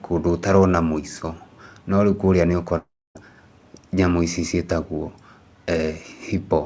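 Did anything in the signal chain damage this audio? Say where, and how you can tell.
Yes. At 2.78 to 3.17 s the speech smears into a fading buzz, then silence, and resumes with 0.38 s lost: likely a long network dropout.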